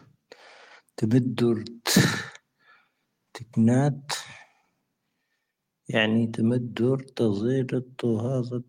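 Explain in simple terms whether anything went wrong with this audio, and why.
Nothing went wrong; the recording sounds as it should.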